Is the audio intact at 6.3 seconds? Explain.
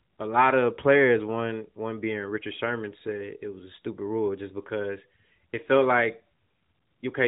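Yes, at 6.3 seconds the speech is intact, with nothing there beyond the narrowband sound of the AMR-NB mobile codec the clip was carried through.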